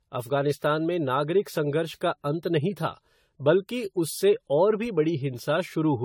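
From start to finish the speech carries generation loss: a swirly, hollow smear with softened consonant attacks, and nothing above about 19.1 kHz. The likely cause is repeated lossy re-encoding, roughly ten passes through something like AAC-LC at 64 kbit/s, each shifting the frame grid and stacking new quantisation noise and spectral holes. A single encode at that rate would sound cleaner; this degradation is compounded rather than simply bandwidth-limited.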